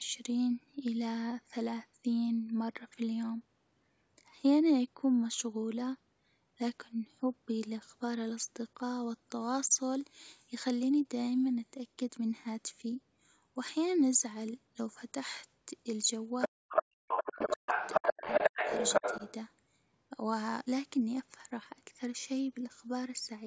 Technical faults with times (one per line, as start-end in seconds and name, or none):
16.41-16.83 other side's voice leaking through
16.47-16.72 speech suppressed in double talk
17.08-19.32 other side's voice leaking through
17.18-17.72 speech suppressed in double talk
17.98-18.71 speech suppressed in double talk
19.00-19.22 speech suppressed in double talk